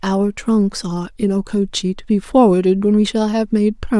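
No technical faults are audible anywhere in this recording.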